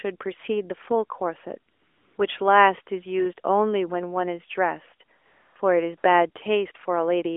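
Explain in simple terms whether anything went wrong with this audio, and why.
Three times the real background drops out and a smooth, even hiss takes its place: from 1.72 to 2.18 s (about half a second), from 5.18 to 5.56 s, and briefly from 5.98 to 6.04 s. This is AMR comfort noise. The phone decided the talker had paused, stopped sending sound, and the receiving end invented a bland noise roughly matching the room's level. Unlike a dropout, the gaps aren't silent, and unlike a noise gate, they're filled with artificial hiss. The narrow, phone-like tone comes from the call's normal mobile codec.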